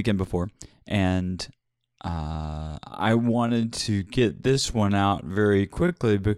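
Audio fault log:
2.07–6.37 s, time-stretched section: from 2.07 s to the end, the pace abruptly slows to 0.64 times normal while pitch stays put, leaving the speech dragging. Software likely lengthened this stretch to fit a duration, repeating short slices to hold pitch.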